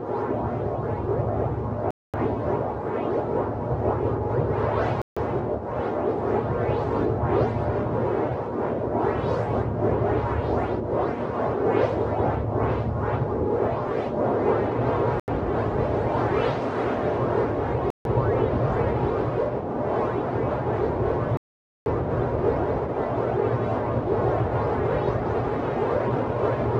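The audio drops to silence five times. At 1.91 s it goes quiet for 231 ms. At 5.02 s the gap is 149 ms. At 15.20 s it is 83 ms. At 17.90 s it is 149 ms again. At 21.37 s comes the longest, 489 ms. Each time the sound stops dead, then resumes. This is likely a Bluetooth stall. Radio interference delays packets, the headphone buffer empties, and playback waits for the resent data.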